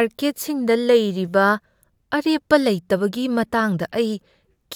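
No technical faults are audible anywhere in the speech recording.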